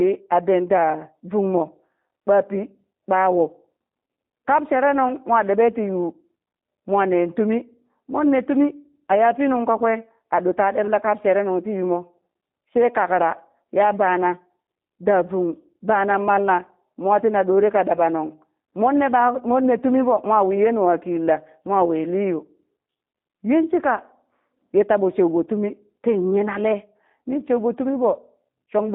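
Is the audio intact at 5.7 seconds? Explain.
No. The G.729 codec affects the whole clip, including 5.7 s. Speech rebuilt from sparse pulses sounds rough and synthetic, and a spectrogram shows nothing outside 200 Hz to 3.7 kHz.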